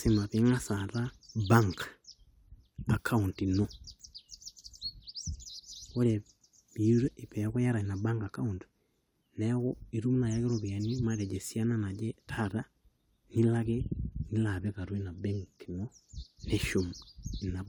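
No audible faults occur anywhere in the recording.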